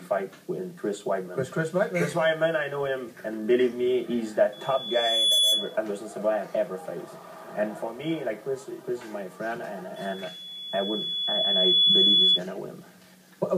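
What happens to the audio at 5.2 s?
Loudspeaker feedback squeal, 4.52 to 5.77 s: the microphone picks up its own loudspeaker, loop gain exceeds one at 3.4 kHz, and that tone swells within a second.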